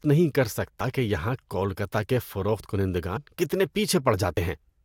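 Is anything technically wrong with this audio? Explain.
Yes. Compressed frames are skipped at 0.80 s (after "نہیں کر"), 3.16–3.18 s (after "یہاں کولکتہ کے فروخت") and 4.37 s. Missing or rejected frames make the speech jump ahead by a few tens of milliseconds, heard as sudden jumps in the speech.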